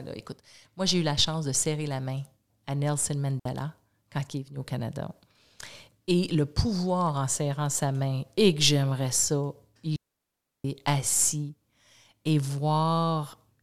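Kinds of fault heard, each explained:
digital wireless dropout: The wireless link lost more data than the receiver could handle, so it muted with a very quick fade, cutting clean near-silent holes in the speech, 60 ms at 3.39 s and 0.69 s from 9.96 to 10.65 s, with no noise burst on either side.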